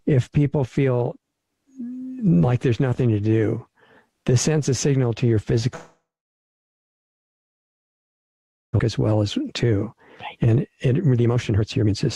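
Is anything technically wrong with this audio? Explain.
Yes. There are two kinds of fault: one long gap and two stretches of speed-up that follow it.

Long network dropout, 5.75 to 8.81 s. This is likely a network outage during which no packets arrived. The receiver concealed the gap for about 3.04 s in total. It first extended the last sound as a decaying buzz or hiss, then left silence for about 2.67 s. When the audio resumes, about 1.6 s of the original is simply missing, and the stream now runs roughly a second and a half late.

Jitter buffer speed-up, 8.89 to 9.96 s and 10.46 to 11.95 s. After the gap, the buffer held far more audio than its target. To shed that excess delay, the receiver repeatedly cut out pitch-period-sized pieces. In the first stretch the sound plays at 108% speed and loses around a tenth of a second. In the second it plays at 138% and loses roughly half a second, so it sounds clearly hurried while the pitch stays unchanged.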